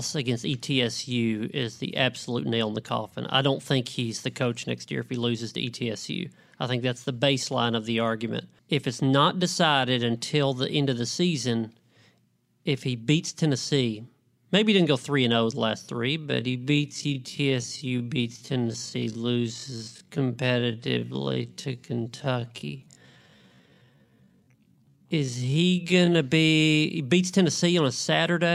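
Speech, with a time-stretched section from 16.18 to 26.20 s, slowed to 0.54 times speed at unchanged pitch, so the pace drags. It was likely a fit-to-length edit, and a spectrogram shows elongated syllables with steady harmonic spacing.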